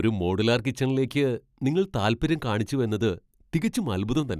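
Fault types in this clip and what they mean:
No faults can be heard in this speech clip. There is nothing to list here.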